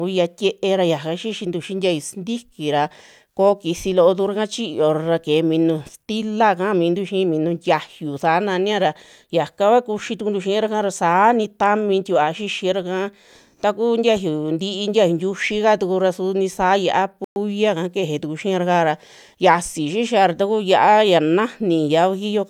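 Bluetooth stall at 17.24 to 17.36 s: the speech cuts to about 117 ms of silence, then resumes, likely because delayed wireless packets left the headphone buffer empty.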